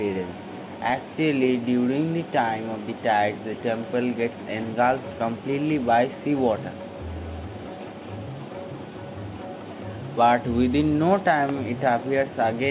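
No technical faults are audible.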